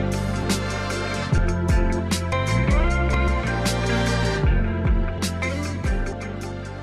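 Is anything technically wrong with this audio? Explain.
Yes. The audio most likely passed through a recorder or processor working in one-second chunks that dropped a short slice at each handover, a fault known as audio missing between chunks. Around 50 ms goes missing at 0.43, 1.38, 3.28, 4.23 and 5.18 s, and the surrounding sound is butted together with no silence. The result is a brief skip every second or so, where the sound jumps abruptly forward.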